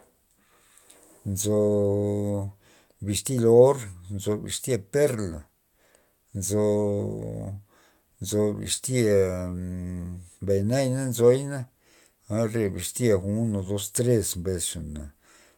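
Nothing in this speech recording stands out as a technical fault at any point, so there's nothing to flag here.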